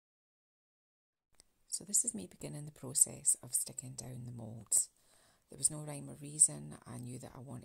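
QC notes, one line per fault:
The signal holds steady and intact from its first moment to its last, with nothing audible that calls for a QC entry.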